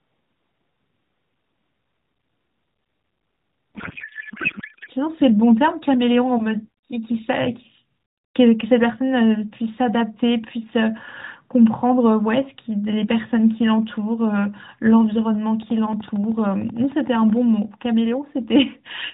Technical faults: codec payload misread; train of clicks

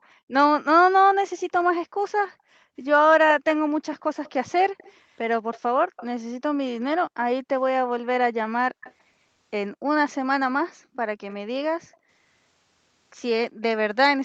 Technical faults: background gated by the echo canceller; echo leak

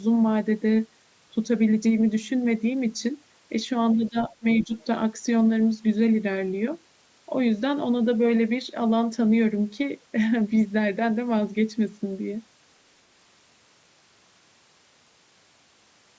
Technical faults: speech suppressed in double talk; other side's voice leaking through

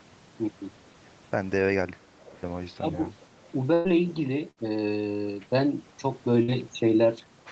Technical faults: speech suppressed in double talk; burst of packet loss

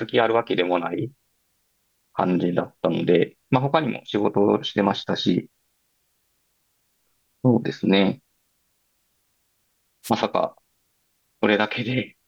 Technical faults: wireless microphone noise hit

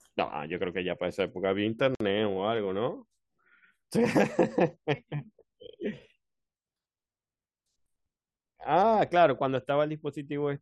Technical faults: gap at a join of encoded pieces

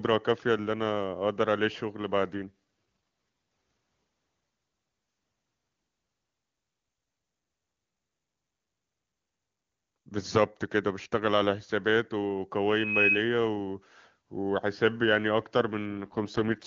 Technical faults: AMR rate drop; loudspeaker feedback squeal

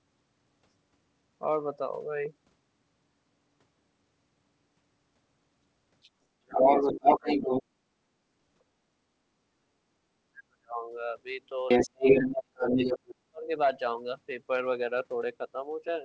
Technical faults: speech suppressed in double talk; other side's voice leaking through

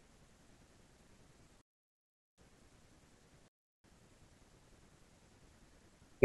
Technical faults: digital wireless dropout

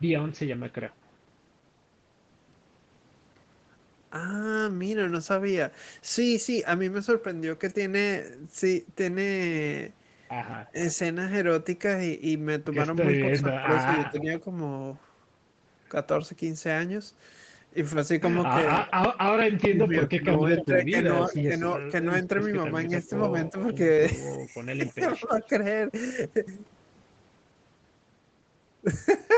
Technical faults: echo leak; speech suppressed in double talk

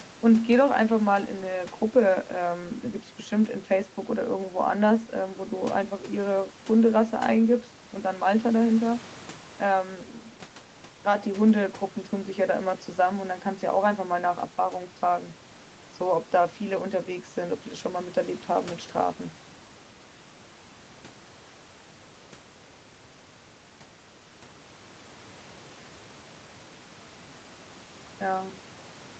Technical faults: none

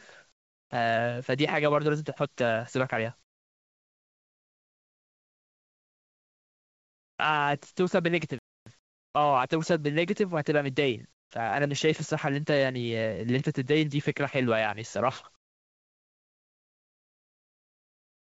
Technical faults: comfort noise in place of the background; playback stall

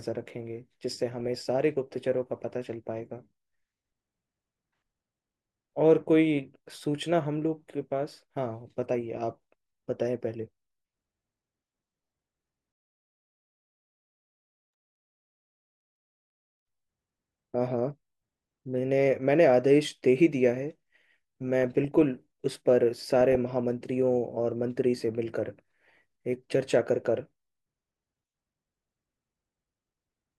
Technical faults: DAB burbling

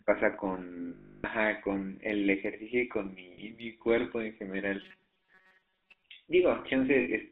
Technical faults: GSM full-rate codec; lost GSM frames; robotic sound from repeated short buffers

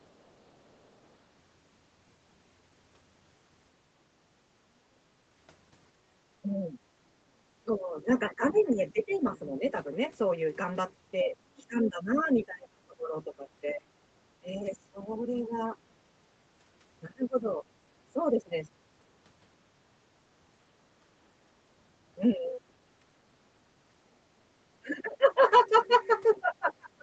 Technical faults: other side's voice leaking through; speech suppressed in double talk

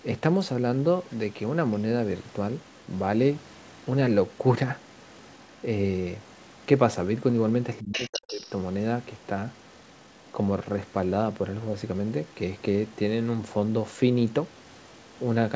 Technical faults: other side's voice leaking through; speech suppressed in double talk

